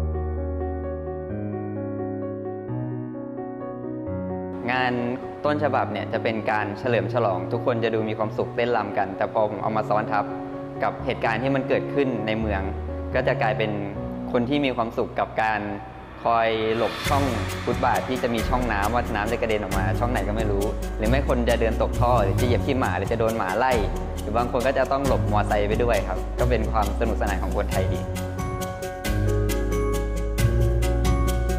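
Nothing stood out as a technical problem on listening.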